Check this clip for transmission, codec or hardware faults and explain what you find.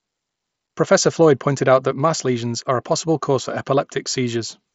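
No transmission, codec or hardware faults are audible in this speech; the band stops near 7.7 kHz with only light coding grain, as expected from a Bluetooth mSBC headset link working normally.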